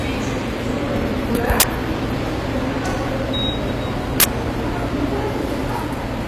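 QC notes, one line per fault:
Throughout: HE-AAC compression. The treble sounds gritty and metallic, with harmonics that don't line up above the crossover. This is likely spectral band replication rebuilding the highs from copied lower bands, at a rate that fits roughly 24 kbps. A spectrogram would show smeared, repeated-looking upper bands extending to about 20.2 kHz.
1.60 s and 4.20 s: uninitialised buffer. Two loud bursts of harsh digital noise, each 40 ms long, come from a block played before any audio was written into it, so stale memory came out as samples. The waveform would show abrupt slabs, and the spectrogram bright broadband columns.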